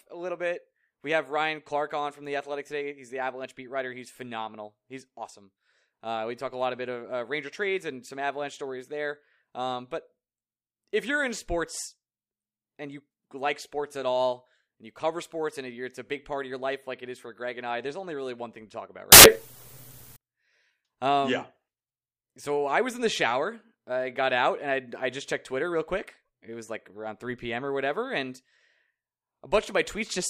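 At 19.12 s, right after "thing to talk about", the speech turns into a burst of harsh, loud broadband noise lasting about 1.04 s, until 20.16 s. These are samples built from the wrong bytes. Each sample's bytes were combined in the wrong order or at a one-byte offset, so the rapidly varying low bits became the loudest part of every value.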